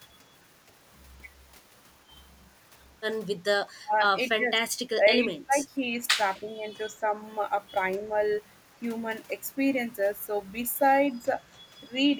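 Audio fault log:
3.77 to 11.28 s, speech suppressed in double talk: the voice dips sharply at 3.77–3.94, 4.37–4.63, 4.94–5.98, 6.4–6.65, 6.95–7.04 and 11.13–11.28 s, falling by roughly 10 to 35 dB, with the deepest cuts near 3.8 s and through the second-long stretch from 4.94 s. This is likely an echo canceller hearing both ends talk at once, failing to tell this talker from loudspeaker echo, and ducking everything.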